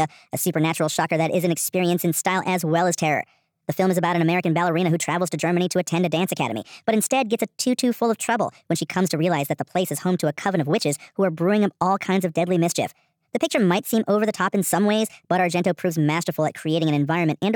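From start to finish, the speech runs fast and high. This is a wrong sample rate fault. Audio recorded at 32 kHz is played at 44.1 kHz without conversion. Everything speeds up 1.38 times. Pitch rises about 5.5 semitones, so voices sound hurried and squeaky.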